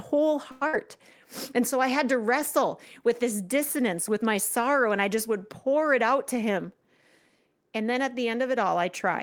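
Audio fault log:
0.51 to 0.63 s, call audio freeze: the sound stops moving forward for about 100 ms and the last fragment is carried on as a short buzz or hiss that thins out, likely because packets were held up and the jitter buffer ran dry. Nothing is lost; the speech picks up exactly where it paused, just later. On a spectrogram the harmonics stretch into flat horizontal bands that fade, and the waveform shows a repeated, decaying cycle before normal detail returns.
0.67 to 0.75 s, burst of packet loss: about 60 ms of speech is gone, replaced by roughly 57 ms of concealment that holds the preceding sound and turns it down, so it comes across as a fading buzz or hiss before the speech jumps ahead past the missing stretch. The spectrogram shows smeared, dimming bands ending in an abrupt change of pattern, and the waveform has a shrinking repeated shape followed by a discontinuity where the speech resumes.
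5.93 to 6.99 s, jitter buffer speed-up: the speech runs about 7% fast at unchanged pitch, with roughly 100 ms trimmed in total. The buffer had built up more delay than it aims for, so the receiver cut out many short slices of one or a few pitch periods to catch up. It sounds hurried. On the spectrogram the harmonic spacing stays the same while syllables are compressed, and the waveform shows small splices between pitch cycles.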